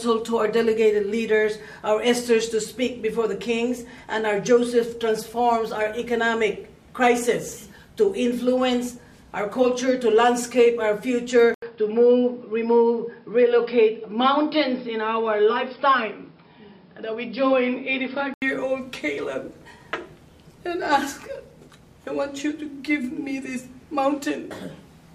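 From 11.54 to 18.42 s the audio turns dull and boxy with nothing above 5.3 kHz, after an 80 ms gap, most likely an input switched to a poorer device.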